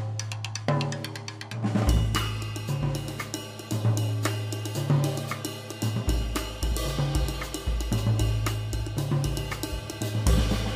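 No technical faults can be heard anywhere in the recording. At no point does the sound break, jump or change in a way that signals something going wrong.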